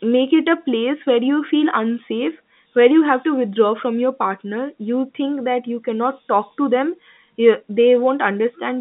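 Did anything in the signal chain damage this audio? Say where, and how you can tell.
No, nothing in the chain hurt this speech clip; it just sits in the usual G.711 telephone band of about 150 Hz to 3.7 kHz, which is simply how a phone line carries it.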